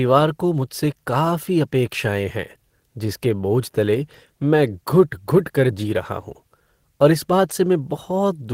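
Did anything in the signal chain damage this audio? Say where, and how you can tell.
No, nothing in the signal chain left an audible mark on this speech recording; the signal stays continuous and intact at every stage, with no disturbance that would point to a fault anywhere along the path.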